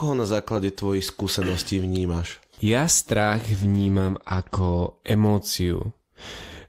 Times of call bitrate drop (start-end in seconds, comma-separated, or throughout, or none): 3.62-4.99